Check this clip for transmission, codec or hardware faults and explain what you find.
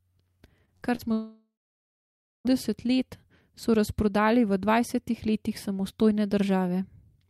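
Two kinds of transmission fault affect this speech clip, both in its first two and a half seconds.

Short concealed packet loss occurs at 0.65 s, 0.77 s and 0.95 s, with gaps of about 20, 40 and 40 ms. The receiver bridged each gap by extending the preceding sound and then blending back, so each one comes through as a brief smear or wobble in the speech.

A long network dropout runs from 1.13 s to 2.47 s. The concealment first extends the last sound and lets it fade, then holds silence for roughly 0.9 s. Speech resumes at "let so razprodali" with the missing stretch gone, most likely because incoming packets stopped arriving for about 1.3 s.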